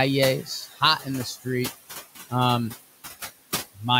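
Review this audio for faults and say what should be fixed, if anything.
Noise suppressor artifacts run through the whole speech clip: the suppressor pulls the room noise, which sits about 14 dB below the speech, down by about 14 dB between phrases and lets it back up under them, so the residual noise pumps. Reducing the suppression depth and smoothing its gain changes over time would prevent this.

Speech cut by the noise suppressor occurs from 0.72 to 0.82 s, where the suppressor misread about a tenth of a second of quiet speech as noise and dropped it by up to about 12 dB, leaving that stretch swallowed and faint. A more conservative speech-presence threshold would keep soft passages from being attenuated.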